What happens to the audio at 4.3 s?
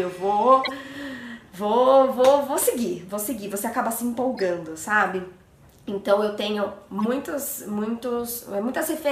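A corrupt frame was decoded: damaged bits in a handful of compressed frames were played as if valid, so misread codes and gains scattered energy into wrong frequencies from 4.33 to 4.43 s. The result is a brief garbled blip peaking around -25 dBFS.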